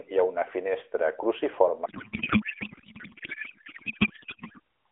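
Speech over what sounds like an AMR narrowband mobile link, and from 1.86 to 4.60 s it collapses into garbled, warbling noise that barely tracks the talker: a codec payload misread, where the receiver seems to treat octet-aligned AMR frames as bandwidth-efficient packing.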